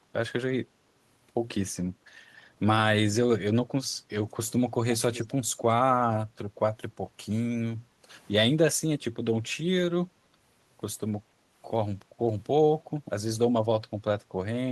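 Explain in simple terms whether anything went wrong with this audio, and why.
Two things went wrong here. First, background gated by the echo canceller: at 0.01 to 0.05 seconds, and again from 7.8 to 8.03 seconds, the room sound briefly dips. The canceller turned the microphone down while the other end's loudspeaker was playing, then let it back up.

Second, an echo leak: from 5.13 to 5.26 seconds there's a faint, quiet repeat of the speech arriving about a quarter-second late. It's likely the far side's canceller missed some of its loudspeaker sound, and that leftover got sent back.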